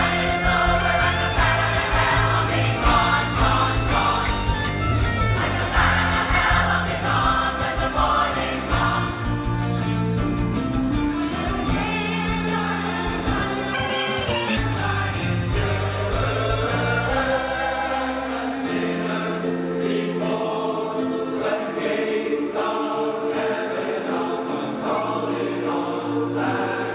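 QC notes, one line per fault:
13.74–14.57 s, section at the wrong speed: this stretch plays at twice the speed, so it comes out rushed and shifted up roughly ten semitones, with pitch and tempo jumping together. A clock mismatch in editing or playback is the likely cause.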